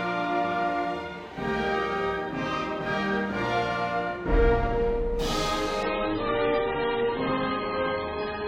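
At 5.83 s the music drops abruptly to an adaptive stream at a lower bitrate, and it stays there to the end at 8.48 s. There is no gap; the treble simply vanishes, leaving the top end dull, swirly and smeared, which points to a fall from roughly 128 to 16 kbit/s MP3. On a spectrogram everything above 5.2 kHz is cut off sharply at that moment, while the waveform continues without a break.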